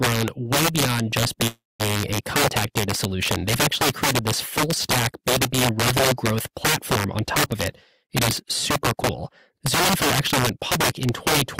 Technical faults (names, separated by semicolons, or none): integer overflow; call audio freeze; jitter buffer speed-up